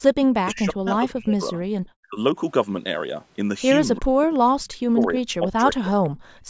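From 0.41 to 1.55 s, 1.98 to 2.19 s and 3.98 to 4.33 s the speech dips sharply, by as much as 40 dB, and breaks up. This is likely speech suppressed in double talk: the echo canceller mistook overlapping far-end sound for echo and turned the talker down with it. At 4.34 to 4.39 s a faint delayed copy of the speech surfaces, about 30 dB below it and trailing by 341 ms. This is likely an echo leak from a loudspeaker whose echo canceller let residue through. The speech is suppressed again from 4.54 to 5.95 s by a similar deep drop, and at 6.04 to 6.09 s another brief echo scrap appears, about 35 dB down at the same 341 ms delay. From 6.23 s to the end, the room sound falls away by about 36 dB. This is background gated by the echo canceller, which clamped the microphone while the loudspeaker played.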